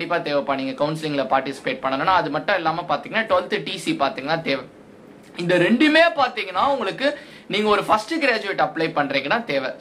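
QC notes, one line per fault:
Throughout: periodic clock jitter. A rough, metallic edge rides on everything, harshest on the higher content. Interference is shaking the converter's clock at around 1 kHz, so each component of the sound picks up sidebands that far above and below it.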